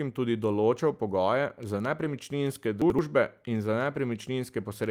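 At 1.99 to 2.05 s, just after "tudi določal pogoje za", two packets were lost, and the decoder rebuilt them as a lost packet from error correction, using low-bitrate copies carried in the following packets. The 40 ms of audio has no gap but sounds rougher and noisier. From 2.82 to 2.99 s, just before "in za", the chunks are out of order. A chunk of about 85 ms arrived one chunk late and plays after the one that should follow it, creating a jumbled moment with three hard joins. At 3.95 to 3.97 s, right after "in za", a second lost packet was rebuilt from error correction. This 20 ms stretch, about one packet's worth, has the same grainy, noisy texture.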